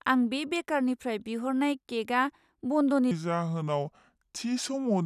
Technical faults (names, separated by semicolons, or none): wrong sample rate